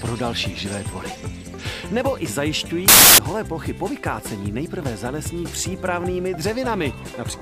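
From 2.88 to 3.18 s the samples are built from the wrong bytes: misassembled bytes turn low bits into loud, harsh broadband noise for that stretch.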